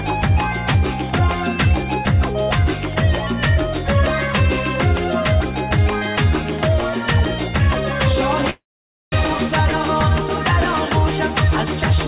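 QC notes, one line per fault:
8.50–9.13 s, call audio freeze: a brief fading buzz, then 0.52 s of silence; audio resumes where it stopped, 0.62 s late, nothing lost. Likely delayed packets emptied the jitter buffer. The waveform shows a decaying tail into a flat line. The spectrogram shows smeared bands, then a blank column.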